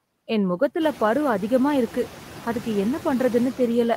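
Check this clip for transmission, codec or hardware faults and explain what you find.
One fault runs through the whole speech clip: noise suppressor artifacts. The suppressor treats steady background noise as unwanted and pulls those frequency bands down by about 5 dB frame by frame, so the noise dips in the gaps between words and swells back up underneath the speech. This is most noticeable after the room noise rises by about 15 dB around the one-second mark, where it sits about 18 dB below the speech.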